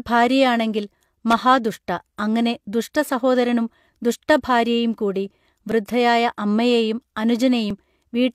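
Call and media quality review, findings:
Loose connector crackle, 1.30 to 1.38 s: short irregular burst of scratchy crackle, about 75 ms. Probable component is a worn or dirty cable contact making and breaking. Its ragged, non-repeating texture separates it from a single digital click.

Overlap between stream segments, 5.72 to 5.75 s (just after "അങ്ങനെ ദുഷ്ടസഹോദരനും ദുഷ്ടഭാര്യയും കൂടി") and 7.70 to 7.74 s: tiny skip, roughly 40 ms of audio lost each time. The events are 2 s apart, which fits the 2 s segment length. Overlapping timestamps cause the player to trim sound that was never doubled. Its regular spacing and single clean jump distinguish it from connector crackle.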